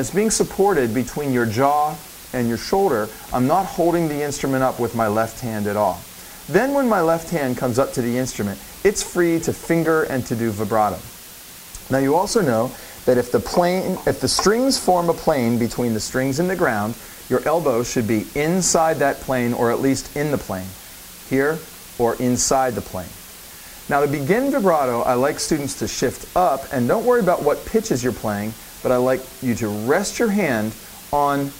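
Running the whole way through the audio is a steady, even hiss, and it's a textbook case of low bit depth with dither. The sound seems to have been reduced to around 6 bits, with dither added before rounding, so instead of gritty distortion the rounding error turns into flat white noise. It sits only about 20 dB under the signal, loud enough that you hear it constantly.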